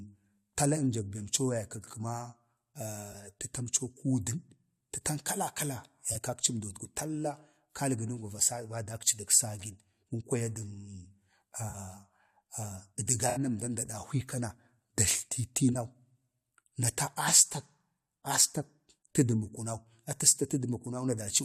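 Concealed frames break the speech at 3.12 to 3.15, 6.11 to 6.16, 7.54 to 7.56, 11.69 to 11.75, 13.29 to 13.39 and 15.73 to 15.76 s. Each is a corrupt frame concealed. The decoder caught damaged AAC data and papered over it.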